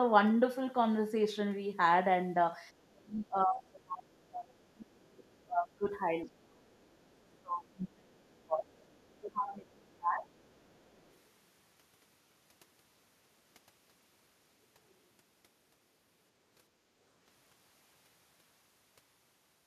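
A speech recording with two echo-control faults. Speech suppressed in double talk: the talker's level collapses from 2.85 to 5.87 s, 6.26 to 6.69 s, 7.24 to 8.71 s and 9.09 to 10.29 s, dropping by roughly 25 to 35 dB at worst, likely because the echo canceller mistook overlapping talk for echo and attenuated everything. The other side's voice is leaking through as faint residual echo, about 30 to 40 dB below the speech, at 6.27 to 6.31 s, 6.71 to 7.39 s, 8.77 to 9.07 s and 10.30 to 11.19 s, likely loudspeaker pickup the canceller failed to remove.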